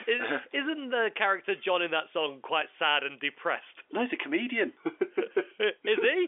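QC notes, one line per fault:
There is no fault to list.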